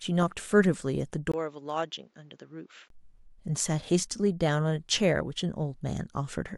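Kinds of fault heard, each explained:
Input switched to a poorer device: from 1.32 to 2.90 s, after a 20 ms gap, the speech turns about 10 dB quieter, loses everything above 7.6 kHz and gains a faint new noise floor, likely from a microphone change. Unlike a plain filter, level and noise shift together, then recover.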